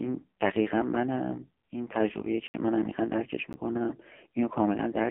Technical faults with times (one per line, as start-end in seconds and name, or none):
0.00-5.11 AMR narrowband mobile codec
2.48-2.54 block of digital silence
3.53 block of digital silence